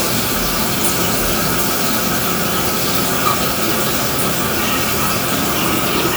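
No technical faults are audible.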